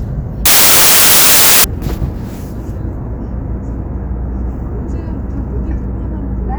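From 0.46 s to 1.64 s, the everyday sound gives way to a burst of loud, harsh broadband noise. This is samples built from the wrong bytes. The decoder misreads how each sample's bytes fit together. It may start one byte off, reverse their order or expect a different alignment. The busy low-order bits then land in the high-order position. Every value becomes a large, random-looking number. The result is a harsh hiss for that stretch.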